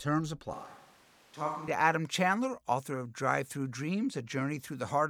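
From 0.54 s to 1.68 s the speech suddenly turns roomy and hollow, loses low end, drops by roughly 5 dB, and picks up background noise sitting only about 25 dB below the speech. It snaps back just as abruptly. This is likely a switch to a distant microphone: the close microphone's signal dropped out, so that stretch comes from a pickup farther away, which captures more room reflections and ambient noise and less direct sound.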